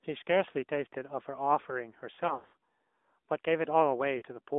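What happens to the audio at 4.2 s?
Between 4.18 and 4.22 s, two consecutive AMR speech frames were lost. Each failed its radio checksum, and a 40 ms gap fits two dropped 20 ms frames. The decoder filled the gap by reusing the last good pitch and vocal tract settings at reduced gain. What you hear is a short smeared, warbling stretch of the speech sound, dipping in level before the next good frame brings the speech back, briefly thin or rough.

Underneath that dropout, the AMR narrowband mobile codec is working throughout. It squeezes the speech into a telephone band of roughly 250 Hz to 3.6 kHz and rebuilds it from a vocal tract model driven by a few pulses per subframe. The damage is plainly audible: the voice has a buzzy, synthetic edge with no air above 3.6 kHz. That texture points to a mid-rate AMR-NB mode around 10 kbps.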